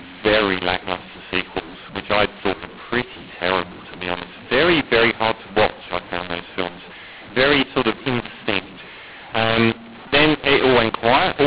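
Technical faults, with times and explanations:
Throughout: mu-law and A-law mixed up. The speech was coded as G.711 A-law but decoded as mu-law, so each 8-bit code maps to the wrong level. Loudness is scrambled, the quietest samples jump well above silence, and the voice turns harsh while pauses fill with noise.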